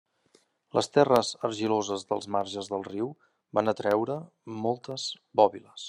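Periodic USB or driver dropouts run from 0.16 s to 5.66 s, recurring every 0.25 s. A blocked bus or driver drops a fraction of a millisecond of speech each time, filling it with silence, so about twenty evenly spaced ticks sound through the speech.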